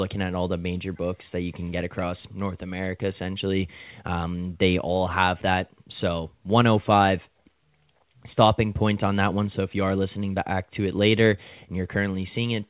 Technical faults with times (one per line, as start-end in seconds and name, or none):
none